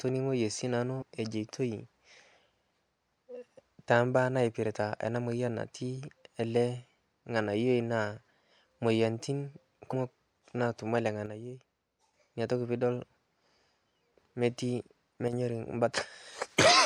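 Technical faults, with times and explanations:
1.01 s and 9.92 s, compressed frames skipped: the speech jumps ahead by about 50 ms and then about 150 ms, whole 26.1 ms frames.
11.26–12.14 s and 15.28–15.33 s, one channel drops out: the level falls abruptly by about 6 dB with no jump in the audio, likely from one stereo channel being lost before the mono sum.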